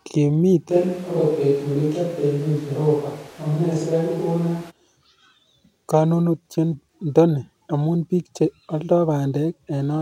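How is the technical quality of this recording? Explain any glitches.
The recording has one glitch. Switch to a distant microphone from 0.72 to 4.69 s: the speech abruptly turns roomy and hollow, with thinner bass and room noise about 25 dB below the speech, because the close microphone likely dropped out and a farther microphone took over.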